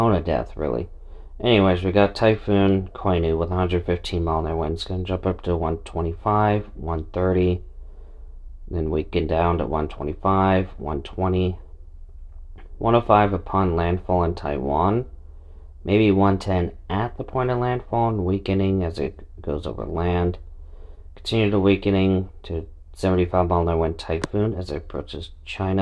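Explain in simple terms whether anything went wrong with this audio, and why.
Nothing went wrong here that I can hear: the sound carries on steadily from beginning to end with no glitches, dropouts or other trouble along the way.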